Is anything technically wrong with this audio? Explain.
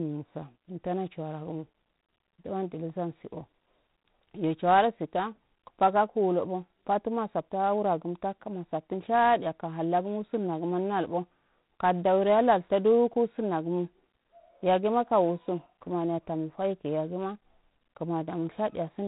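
Yes. Throughout the speech there's G.726 ADPCM coding, at what sounds like 24 kbit/s. Each sample carries only a few bits of difference from an adaptive prediction, so quantisation noise rides on the speech as a harsh, rasping hiss that swells with level, and nothing above 3.8 kHz survives.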